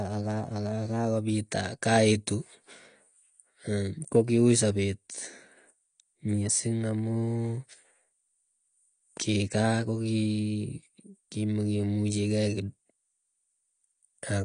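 From start to end the speech is dull and smeared. Nothing sounds above about 9.8 kHz. Sibilants turn fizzy and warbling. The likely cause is AAC compression at a low bitrate, which fits about 32 kbps AAC-LC. The encoder drops high bands and coarsely quantises the rest.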